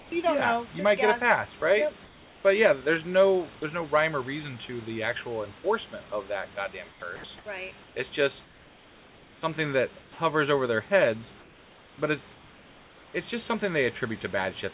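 Comfort noise in place of the background appears at 0.00 to 0.12 s, 1.60 to 2.44 s, 6.90 to 9.42 s after "enforcement of that goddamn", 10.02 to 10.18 s just before "over their heads", and 11.40 to 13.14 s between "over their heads" and "it's just something". In these gaps the real room background gives way to a steady, featureless hiss, about 6 to 7 dB quieter in the short openings, likely because the sender stopped transmitting during pauses and the receiver synthesised filler noise.

Sound dropped by the voice detector occurs at 1.60 s, where about 20 ms of audio is replaced by that same flat noise, with the detector apparently judging the sound to be background.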